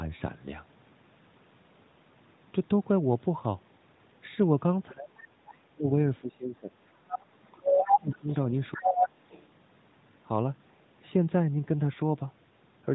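From 4.91 to 5.88 s, 6.21 to 6.73 s, 7.17 to 8.29 s and 8.74 to 9.21 s, the talker's speech is suppressed in double talk. It sinks by up to about 35 dB in ragged, gated stretches, likely because the echo canceller ducked its own talker during crosstalk.

At 7.08 to 7.19 s, and again from 7.64 to 9.46 s, the other side's voice leaks through as a second voice, about 5 dB below the talker the first time and at roughly the talker's own level the second. This is likely residual loudspeaker echo, and unlike suppression it adds sound rather than removing it.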